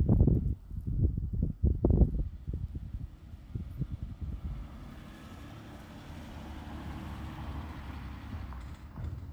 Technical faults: none

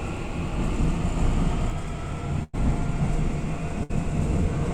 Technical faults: doubled audio track; burst of packet loss

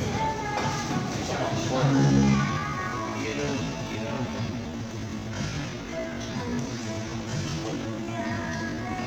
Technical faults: time-stretched section

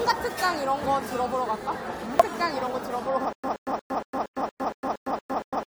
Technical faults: damaged data in a compressed stream; stutter with silent gaps

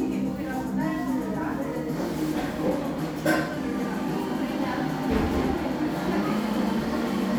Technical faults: none

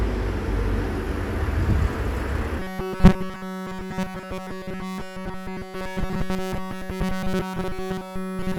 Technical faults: robotic sound from repeated short buffers

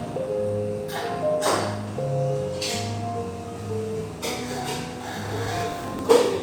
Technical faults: processor overload crackle

